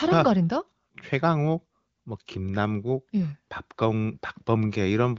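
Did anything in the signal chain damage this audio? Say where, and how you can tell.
No, nothing in this speech stood out on listening as damage from any stage of the chain, and the wideband HD Voice coding it went through can be heard doing its normal job.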